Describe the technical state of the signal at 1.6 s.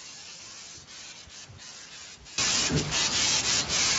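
At 1.6 s the speech is intact, with no audible fault and any Speex coding damage at most faint.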